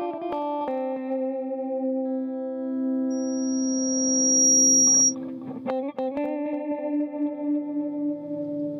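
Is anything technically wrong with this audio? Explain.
Yes. From 3.10 s to 5.15 s there is loudspeaker feedback squeal, a single tone near 5.7 kHz. A microphone is picking up the loudspeaker it drives, and at that frequency the loop gain exceeds one, so the tone feeds itself and climbs over roughly a second and a half until it sits around 10 dB above the rest of the sound. That gradual swell distinguishes it from an interfering whistle or test tone, which would start at full level and stay steady.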